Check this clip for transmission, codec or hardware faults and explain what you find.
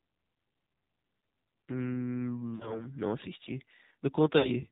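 Two faults stand out: the whole clip went through a narrowband mobile codec, and it has two short dropouts from lost AMR speech frames.

The AMR narrowband mobile codec is there from start to finish. Nothing gets through above 4 kHz, and the voice sounds noticeably buzzy and synthetic, which fits a low AMR-NB mode around 7.4 kbps. At that rate the vocal tract model gets very few pulses per subframe, so the voice turns thin and artificial.

Lost AMR speech frames show up from 2.56 to 2.87 s and again from 4.38 to 4.50 s. The decoder filled each gap by replaying its last good pitch and filter settings at falling gain, so the sound stretches out, fades, and comes back rough. The dips sound like roughly two and three missing 20 ms frames.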